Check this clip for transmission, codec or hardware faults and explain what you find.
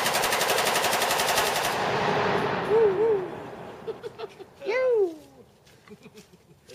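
One fault stands out: a doubled audio track from 1.36 s to 4.0 s. A second, somewhat quieter copy of the sound trails about a third of a second behind, dry and full-band, and it cuts in and out abruptly. This likely comes from the signal being captured again through a slower path.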